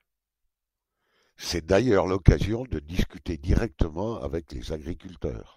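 Nothing stood out as a technical problem on listening to the speech here.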